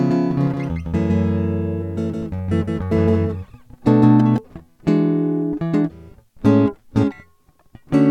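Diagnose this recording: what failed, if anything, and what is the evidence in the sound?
The music carries a doubled audio track from the very start until 4.38 s. A full-band second copy trails the original by roughly 150 ms at about 5 dB below it. It adds no decay or room colour, so it reads as a clean slapback rather than reverb. At 4.38 s the copy drops out abruptly. The likely cause is the same signal reaching the mix twice at the driver or routing stage, one path delayed relative to the other.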